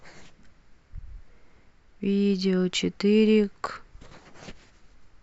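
No technical faults are audible.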